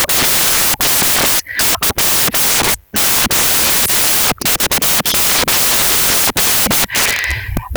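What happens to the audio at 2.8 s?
At 2.8 s the speech is covered by loud, harsh broadband noise, because the samples are built from the wrong bytes, a fault that runs through the whole clip rather than starting there. Each value is assembled from misordered or misaligned bytes, so the rapidly changing low bits land in the most significant positions. On a spectrogram this shows as dense, flat energy across all frequencies, and the waveform sits as a thick, dense band.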